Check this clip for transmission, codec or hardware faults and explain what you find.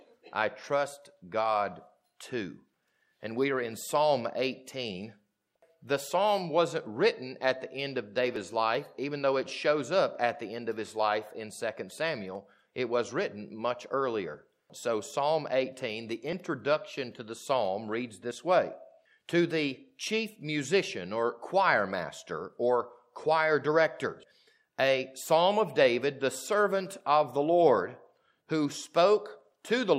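There is one hardware-path fault: periodic USB or driver dropouts from 8.36 to 18.31 s, about every 1.99 s. A blocked bus skips roughly 10 ms each time, giving regular ticks, seen as thin vertical lines on a spectrogram and splice discontinuities in the waveform.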